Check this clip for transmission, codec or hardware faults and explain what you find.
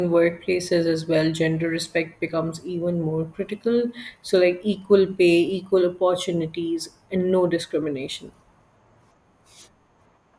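No transmission, codec or hardware faults are audible anywhere in this speech recording.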